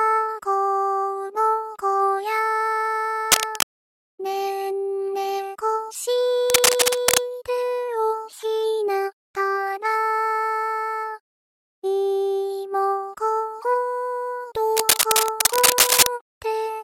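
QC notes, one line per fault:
3.27–3.74 s, 6.50–7.20 s, 14.76–16.08 s: cable scratch noise. Harsh, uneven scratching bursts, about as loud as the sound or louder, likely from a worn connector being moved.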